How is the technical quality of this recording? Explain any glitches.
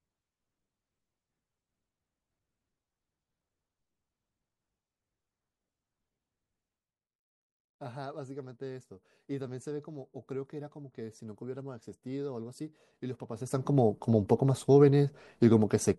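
One glitch stands out near the end. Zipper noise, 13.26 to 13.72 s: a level shift of around 15 dB is applied in 1 dB jumps, roughly fifty a second, without smoothing. Each jump leaves a tiny click, so the speech carries a fast ticking, zipping texture while the level moves.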